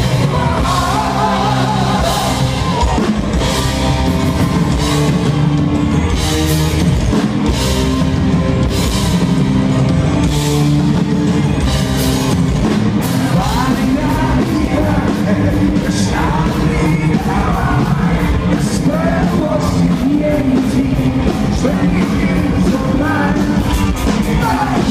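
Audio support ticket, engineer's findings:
No faults found in the audio on the engineer's review for this support ticket.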